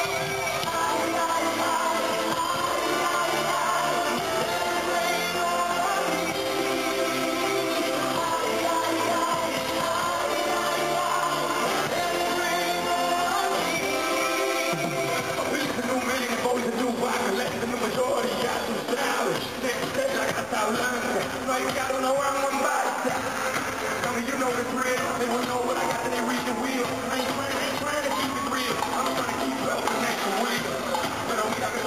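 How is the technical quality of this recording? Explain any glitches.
The recording carries one fault for its entire length: crude rate conversion. Linear interpolation without filtering, consistent with a 32 kHz to 48 kHz step, leaves inharmonic error roughly 25 dB down, heard as a gritty fizz tracking loud, bright sound.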